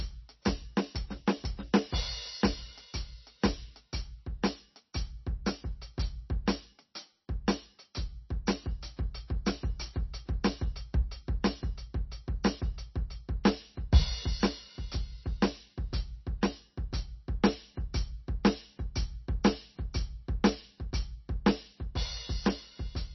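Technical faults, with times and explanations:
Throughout, MP3 compression, heavy: the music has nothing above 5.9 kHz, so the treble is simply gone. The damage fits a very low bitrate, around 27 kbps. Starved of bits, the encoder likely dropped weak frequency lines frame by frame, giving a watery, swirly texture and smeared attacks.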